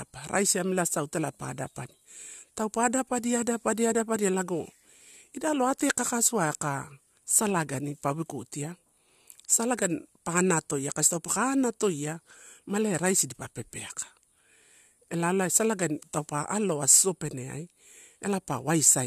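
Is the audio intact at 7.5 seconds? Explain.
Yes, at 7.5 seconds the speech plays through cleanly, with no dropout, click, distortion or other fault to be heard at that moment.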